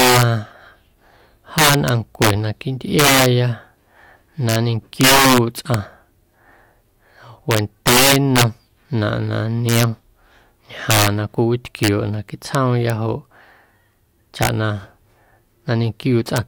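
Throughout the speech, the loudest peaks burst into violent cracks far harsher than clipping. This is integer overflow: a gain pushed about 11 dB too hot wraps a small share of samples, perhaps one or two percent, to the opposite extreme instead of limiting them.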